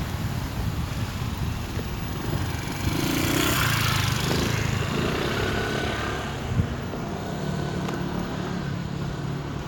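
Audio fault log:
No faults can be heard in this recording of sounds. There is nothing to enter in the log.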